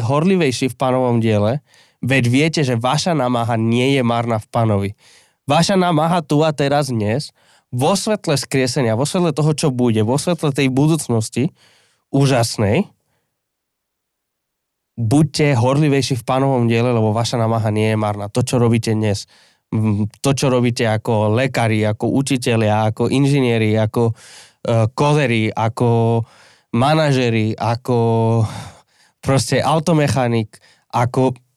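No technical faults can be heard in this speech recording. Nothing in it calls for a time stamp or an explanation.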